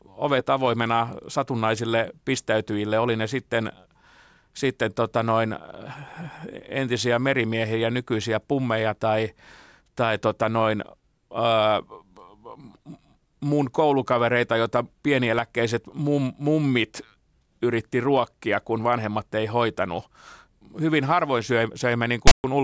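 File tags played as audio appear at 22.27 to 22.44 s, right at the end of this speech clip. A block of text metadata with zero padding was read as though it were sample data. The text bytes come out as a loud, one-sided rasp that starts abruptly. The padding decodes as digital silence, so the burst has hard edges on both sides rather than any natural onset or decay.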